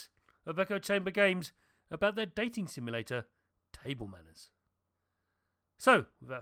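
Speech recording with no audible technical faults anywhere in the clip.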